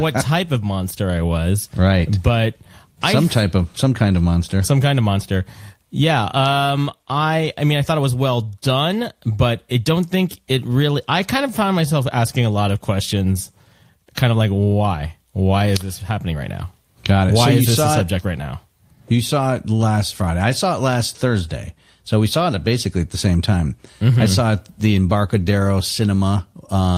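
No technical faults can be heard at any point in the clip.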